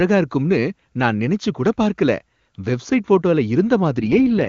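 Right near the end, from 3.98 to 4.48 s, the speech goes rough and raspy in an AMR rate drop, which fits the link pushing AMR-WB from 23.85 down to about 6.6 kbit/s.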